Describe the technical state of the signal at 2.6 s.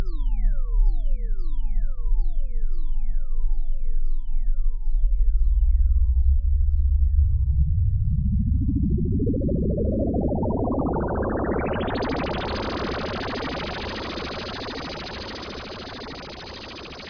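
Nothing is wrong with the signal at 2.6 s; the audio there is intact, with no fault to be heard at that moment.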